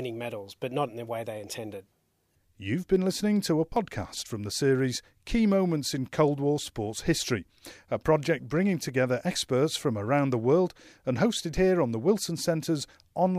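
No technical faults can be heard.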